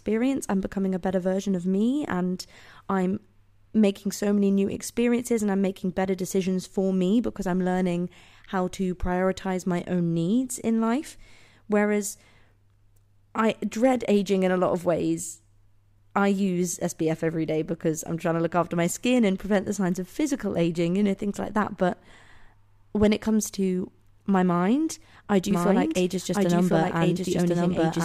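From 25.51 s to the end, after "to my mind I", a doubled audio track appears: a second full-band copy trails about a second behind at roughly equal level, likely from a slower capture path. It starts abruptly, and the waveform and spectrogram show the same shapes repeated, offset by one second.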